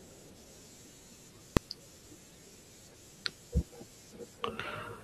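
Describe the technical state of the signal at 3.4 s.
At 3.4 s the speech signal is intact, with no audible dropout, click, distortion or other fault at that moment.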